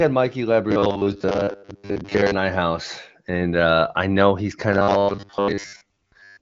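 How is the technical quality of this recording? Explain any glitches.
Two stretches of the speech collapse into a stiff, metallic robotic buzz, from 0.71 to 2.35 s and again from 4.73 s, just after "uh I know he's", to the end at 6.41 s. The buzz sits at a fixed 100 Hz, which points to robotic sound from repeated short buffers, most likely about 10 ms long. When fresh audio arrives too slowly, the last short buffer is replayed to fill the gap, so most of the real speech in those stretches is skipped.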